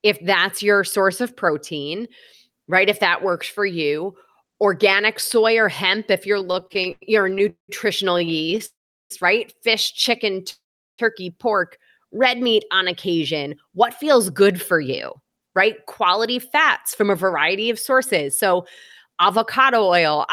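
Right after "or hemp if you're", from 6.39 to 8.61 s, the speech drags and stutters through 23 short holds. These repeated stalls (stutter) fill 559 ms, about a quarter of the span, and the longest lasts 189 ms. Packets kept arriving late, so the jitter buffer ran dry and the receiver stretched the last sound each time. Nothing is lost.

Two call audio freezes follow, at 8.65 to 9.12 s and at 10.50 to 11.00 s. In each, a brief fading continuation gives way to silence of 370 ms and then 390 ms before the speech resumes where it stopped. The likely cause is packets held up in transit that emptied the buffer, so each freeze adds 449 ms and then 479 ms of delay. No audio is dropped.

From 12.09 to 13.19 s the speech slows to 93% of normal speed at unchanged pitch, with sounds drawn out. This jitter buffer slow-down comes from the receiver repeating single pitch periods to rebuild its reserve, adding 82 ms.

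From 14.30 s to 20.19 s the speech runs about 5% fast at the same pitch and sounds slightly hurried. This jitter buffer speed-up happens because the buffer held more than its target, so the receiver cut short pitch-period pieces, removing roughly 0.3 s in total.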